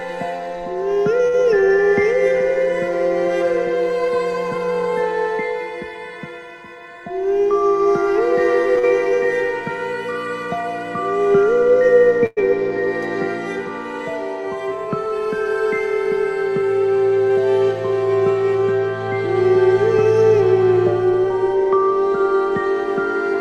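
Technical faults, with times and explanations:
1.27–1.36 s, short stall from a late packet. A packet arrived late and the jitter buffer ran dry. The receiver held the last sound for about 61 ms until the packet came, then carried on from the same point. Nothing is lost. The sound is simply drawn out, with a faint buzz or dip where it is stretched. The delay through the call grows by 61 ms as a result.
8.79–8.85 s, short concealed packet loss. About 40 ms of audio never reached the decoder in time. The receiver covered the gap with 44 ms of made-up sound, extending what came before from its pitch or as shaped noise. It then blended back into the real signal. The result is a brief smear or wobble, and whatever fell in that 40 ms is gone.
12.26–12.39 s, call audio freeze. The sound stops moving forward for about 106 ms. The last sound is continued as a fading buzz or hiss, ending in about 10 ms of silence. 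Then the audio resumes exactly where it left off. Nothing is skipped, but a pause has been inserted. The likely cause is packets held up in transit, so the jitter buffer emptied and the receiver had to wait.
14.70–17.37 s, jitter buffer speed-up. The buffer had built up more audio than it aims to hold. To bring the delay back down, the receiver cut many tiny slices of one or a few pitch periods, roughly 70 ms in all. Playback runs at about 102% speed while the pitch stays the same. Any steady rhythm drifts ahead.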